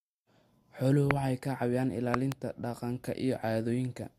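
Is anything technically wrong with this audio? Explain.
Yes. The speech carries two loud pops. The first, at 1.11 s, is a single sharp pop just before "waxay caawiyaan", peaking roughly 25 dB above the voice. The second runs from 2.14 to 2.34 s, just after "waxay caawiyaan", and is a double pop, about 20 dB above the voice. Each is likely a sudden voltage step or pulse, from a plug, switch, static or driver glitch, shaped by the following circuits. The speech continues beneath both.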